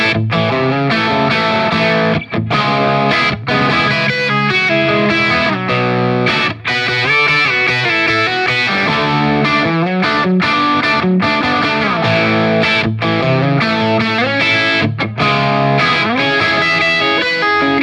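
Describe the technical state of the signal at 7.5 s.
At 7.5 s the signal is intact, with no dropout, clipping, distortion or other fault to be heard.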